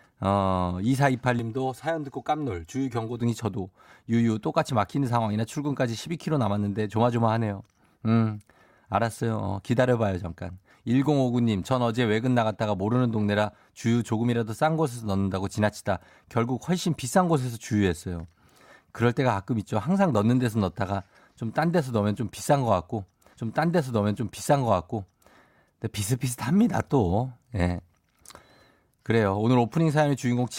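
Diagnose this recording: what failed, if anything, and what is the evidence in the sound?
From 1.39 to 3.20 s the speech turns hollow and phasey, with a thin, tube-like colouring that stays fixed rather than sweeping. That is channel delay causing comb filtering. One channel arrives roughly 3 ms behind the other, and when the two are summed to mono the shared content cancels at evenly spaced frequencies, with the first notch around 200 Hz. The fault sits at the driver or buffer stage, where one channel's samples were queued late.

From 23.33 to 25.33 s a stream segment is repeated. A small blip marks the jump back, and then 2 s of speech that has just played is heard again, adding that much to the running time. This points to the network or playback stage: the player fetched or queued the same segment twice and played both copies in sequence instead of discarding the duplicate.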